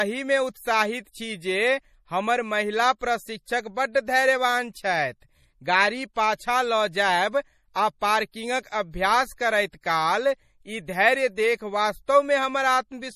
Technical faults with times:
0.00-13.15 MP3 compression

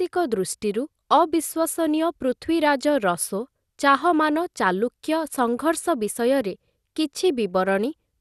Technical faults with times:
0.00-8.21 MP2 compression

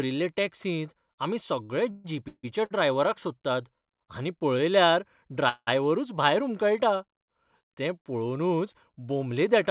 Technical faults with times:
1.64-2.72 repeated stalls (stutter)
5.49-5.69 call audio freeze

